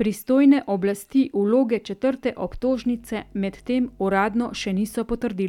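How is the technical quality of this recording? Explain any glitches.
The recording has one glitch, a mains hum in the second half. From 2.65 to 4.93 s, a steady 50 Hz tone sits roughly 30 dB under the speech. A ground loop or nearby transformer leaks the power line into the signal. Unlike broadband rumble, it holds one fixed, pitched frequency.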